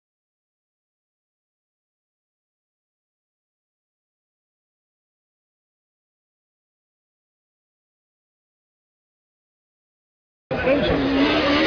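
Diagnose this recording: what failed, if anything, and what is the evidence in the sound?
Nothing failed here as far as I can hear, so there's no stage to point at and nothing in the sound that counts as evidence of a problem.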